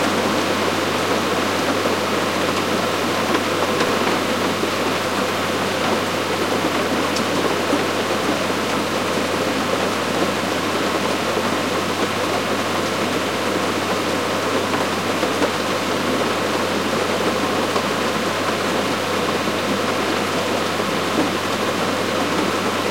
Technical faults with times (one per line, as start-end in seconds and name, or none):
3.87-3.89 chunks out of order